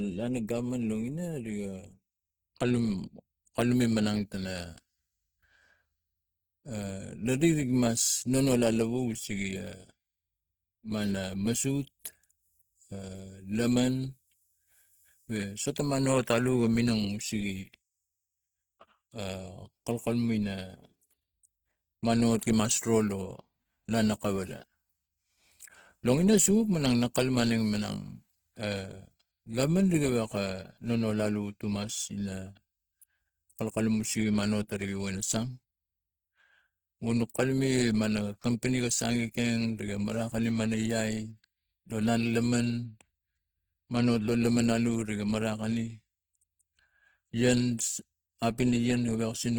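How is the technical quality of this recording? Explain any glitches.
The technical quality is compromised: codec damage is plainly audible throughout the speech, and one brief smeared attack stands out near the end.

Opus compression, throughout: the grainy, rough texture on the voice is likely from Opus in its CELT music mode, consistent with a bitrate around 16 kbps. Starved bands are refilled with folded or noisy content, so tones turn noisy rather than swirly, though the bandwidth stays full, up to about 20.2 kHz.

Pre-echo, at 47.77 s: a sharp onset fell late in a transform block, and the quantisation noise sized for that loud attack spread back into the quiet instant before it, across about 15 ms. A short hiss precedes the attack, which sounds softened and smeared.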